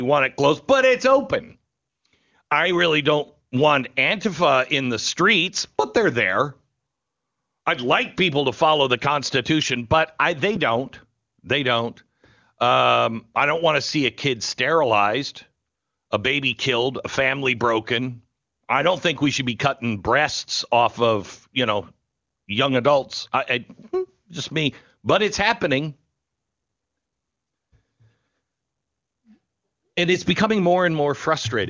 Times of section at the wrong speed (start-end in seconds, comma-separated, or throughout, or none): none